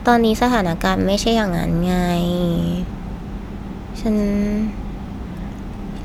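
Speech recording with no audible technical faults.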